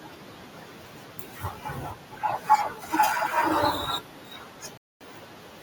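A speech recording with a single rebuffering stall: at 4.77 s the sound drops to silence for about 0.23 s, then picks up at 5.01 s exactly where it left off. The player ran dry of downloaded audio and waited for more. Unlike a dropout or packet loss, nothing is skipped or concealed. The speech simply pauses and continues intact, so the clip runs longer rather than missing material.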